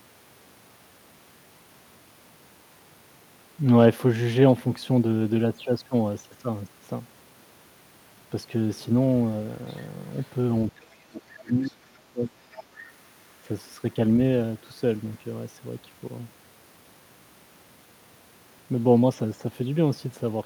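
A faint second voice surfaces briefly from 9.69 to 9.86 s and again from 10.15 to 10.3 s, sitting far below the main talker, roughly 30 dB down and then a little lower still. This is the other side's voice leaking through: the talker's loudspeaker output reaching the microphone, with the echo canceller likely leaving a residue. From 10.75 to 12.69 s the talker's own speech sinks for about two seconds, at its deepest roughly 30 dB quieter. This is speech suppressed in double talk. With both parties speaking at once, the canceller likely could not tell the near voice from the echo and turned everything down. Within that stretch the leak returns in short bursts, at 11.65 s at roughly 30 dB down, and from 12.52 to 12.63 s more plainly at around 20 dB below the speech.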